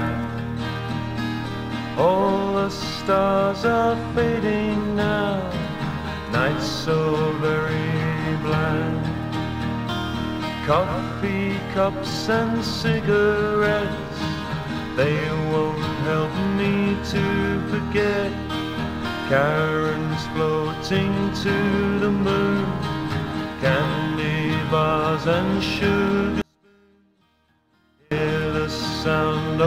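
From 26.42 to 28.11 s the audio drops about 36 dB to a faint residue, likely one channel inverted, cancelling the shared content in mono.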